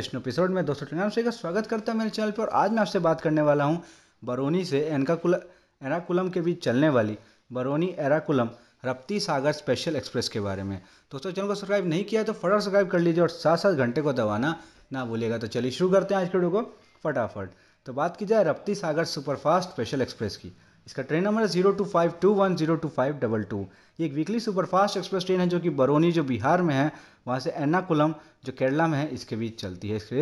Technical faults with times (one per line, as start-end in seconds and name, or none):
none